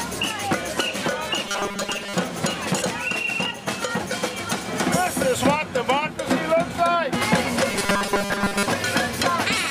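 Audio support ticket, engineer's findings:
Rigid metallic buzz at a fixed 200 Hz, sound shape only loosely kept. 1.44–2.14 s and 7.70–8.67 s. Robotic sound from repeated short buffers. Likely cause: audio input starved, playback looping the last buffer. A 200 Hz buzz fits a 5 ms loop. Most of each span is repeats, with the missing audio skipped.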